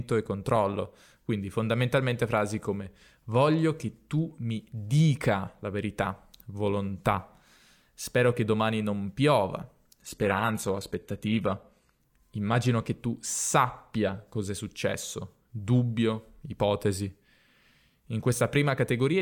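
Adaptive stream at a lower bitrate, 10.00 to 12.00 s, after "che domani non piova": the stream dropped without a gap to what sounds like HE-AAC near 20 kbit/s, losing everything above 14.9 kHz.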